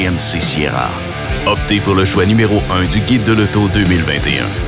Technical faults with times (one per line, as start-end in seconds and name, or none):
none